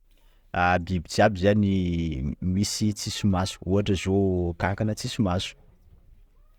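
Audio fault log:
No faults heard anywhere in this speech recording.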